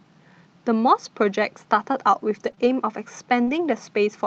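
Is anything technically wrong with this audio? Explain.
Yes. Between 2.35 and 3.53 s there are scattered short gaps: about three gaps from lost packets, the longest around 40 ms. The receiver filled each one by extending the preceding sound, leaving brief ticks and smeared hiccups rather than one long, silent dropout.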